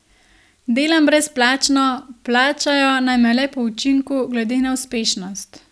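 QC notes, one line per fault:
No audible faults found anywhere in this speech recording.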